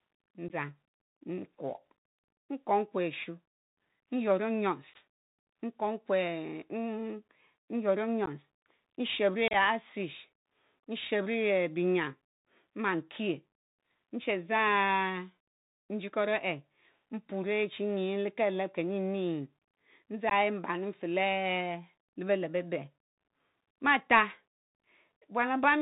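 Throughout, the speech is carried by the Bluetooth CVSD headset codec at 64 kbps. This one-bit delta modulator's adaptive step lags behind loud, fast high content, so sibilants turn scratchy over a granular hiss. On a spectrogram everything stops sharply at 4 kHz, with a grainy noise floor underneath.

Unconcealed Bluetooth headset packet loss cuts short holes at 0.48–0.50, 4.94–4.96, 8.26–8.28 and 20.30–20.33 s, each losing about 15 ms, roughly a couple of packets. At 9.48–9.55 s, losses totalling 37.5 ms are scattered over 60 ms, the longest run 30 ms. Nothing fills the gaps, so the speech returns briefly quieter after each. The waveform shows flat, square-edged dropouts, and the spectrogram shows thin blank vertical slices.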